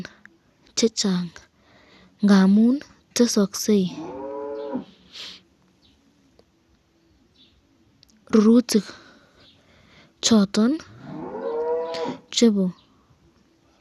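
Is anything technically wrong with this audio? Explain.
Yes. Throughout the speech the sound is dull, with nothing above about 12.2 kHz, and it carries a plainly audible gurgling, granular roughness. This points to MP2 compression as the likely cause, at a bitrate that fits roughly 80 kbps. MPEG Layer II divides the signal into 32 sub-bands and shares out bits among them. With too few bits, the upper bands are switched off and flicker, and the remaining bands are coarsely quantised, giving that grainy texture.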